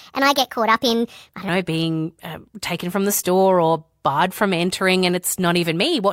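A speech clip whose opening, from 0.0 to 1.49 s, is a section at the wrong speed: it runs 1.3 times too fast, so the voice is both hurried and raised by about five semitones until normal delivery resumes at "know being um taken". The likely cause is that stretch being played or edited against the wrong clock. Unlike a pitch shift, which leaves the pacing intact, here timing and pitch move together, and both snap back at once.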